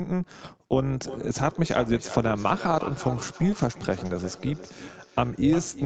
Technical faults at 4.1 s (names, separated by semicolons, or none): overlap-add ripple; feedback echo between two devices